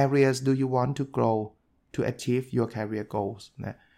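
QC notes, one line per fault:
No fault found, so there are no QC notes to give.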